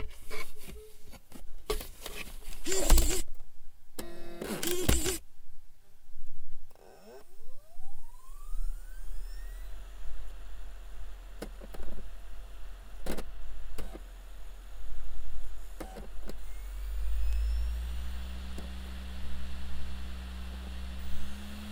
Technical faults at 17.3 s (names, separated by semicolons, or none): bit error spike